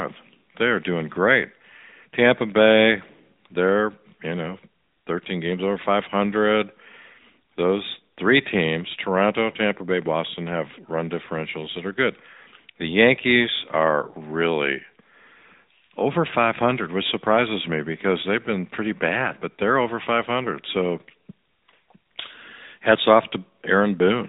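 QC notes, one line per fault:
Throughout: AMR narrowband mobile codec. The speech went through the AMR-NB mobile codec, which samples at 8 kHz and rebuilds the voice from a vocal-tract model driven by sparse pulses. Nothing above 3.8 kHz remains, the coding damage is plainly audible, and the quality points to a mid-rate mode near 10 kbps.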